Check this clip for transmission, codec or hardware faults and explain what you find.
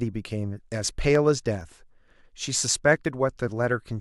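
Two kinds of fault are audible in this speech clip: one pop and two small skips.

Loud pop: A single sharp pop sits on top of the speech from 1.15 to 1.17 s, peaking at about 10 dB above it, while the talking carries on underneath. It is likely an electrical pulse, such as a switch or static discharge, added to the signal path.

Dropped buffer (overrun): At 1.61 s and again at 3.05 s there is a tiny jump forward in the speech, roughly 10 ms missing each time, with no gap of silence. Samples were likely overwritten before being read, joining the surrounding audio directly.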